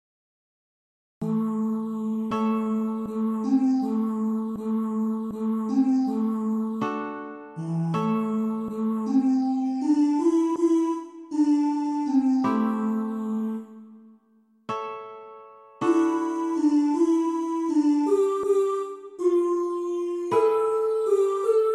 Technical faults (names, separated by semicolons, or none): cut-off start